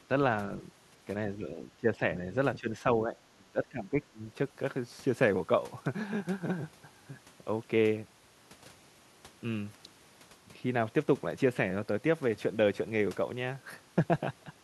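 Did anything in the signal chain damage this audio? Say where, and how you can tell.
Yes. The damage sits in call processing, most likely speech suppressed in double talk. The speech level dips in four places: 1.38 to 2.02 s by about 5 dB, 2.59 to 2.7 s by about 10 dB, 3.05 to 3.16 s by about 5 dB, and 3.34 to 4.2 s by about 20 dB. Those short, uneven gain cuts point to an echo canceller that, with both ends talking at once, mistook the near talker for loudspeaker echo and attenuated it.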